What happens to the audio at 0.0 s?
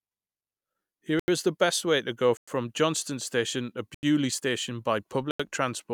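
Nothing goes wrong at 0.0 s; the audio is intact at that point.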